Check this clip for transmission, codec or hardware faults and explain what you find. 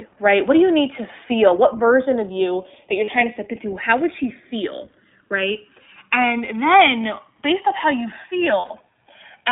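Three faults are present: the two channels drift apart in timing, the whole clip has passed through the iLBC codec, and there are three short bursts of lost iLBC frames.

Channels drifting apart, throughout: the two channels appear to come from devices on independent clocks running roughly 150 ppm apart, so the inter-channel delay creeps up to around a millisecond and a half by the end. Summed to mono, that changing offset produces comb-filter notches that glide slowly across the spectrum, heard as a gradual flanging or hollow swirl building over the speech.

iLBC codec, throughout: the speech sits in a narrowband telephone line, roughly 250 Hz to 3.6 kHz, with nothing above it. The damage fits iLBC at its 15.2 kbps, 20 ms frame mode. Each frame's excitation is coded independently, so the speech remains intelligible but carries a plainly audible rough, slightly synthetic quality. Sibilants and breath lose their brightness, and the low end is thin.

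Lost iLBC frames, at 3.04 to 3.10 s, 7.03 to 7.05 s and 8.60 to 8.80 s: packets went missing and the decoder concealed them by repeating the last pitch cycle blended with noise. The first gap lasts 40 ms, which fits two 20 ms frames. The second lasts 20 ms, consistent with a single frame. The third totals 100 ms scattered across 200 ms, with runs of up to about 40 ms. Each gap sounds like a brief held, buzzy vowel, and the voice returns to normal almost immediately afterwards.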